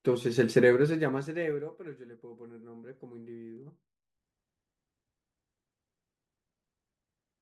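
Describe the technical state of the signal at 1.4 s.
At 1.4 s the signal has zipper noise. It runs from 0.60 to 1.84 s. The speech is turned down by roughly 20 dB in unsmoothed 2 dB steps, about ten a second. Each jump clicks, so a fast ticking rides on the fade.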